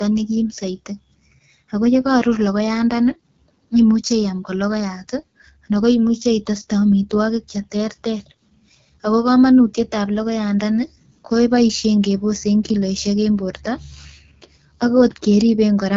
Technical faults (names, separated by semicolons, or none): AMR wideband (HD Voice) codec